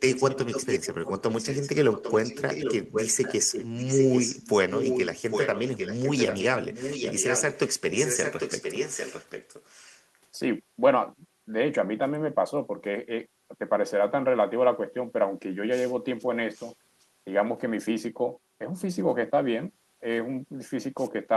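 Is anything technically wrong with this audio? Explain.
Yes, there's echo leak. A delayed copy of the speech trails it by about 0.8 s at 0.09–0.89, 1.32–2.75, 2.92–4.49, 4.7–6.44 and 6.73–10.04 s, barely quieter than the original, then a faint scrap at 16.55–16.74 s. Likely a speakerphone whose echo canceller let its own playback through.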